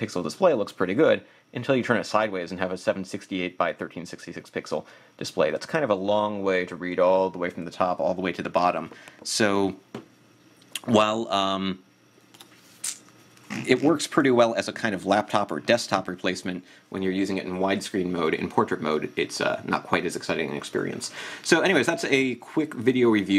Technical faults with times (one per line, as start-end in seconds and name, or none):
none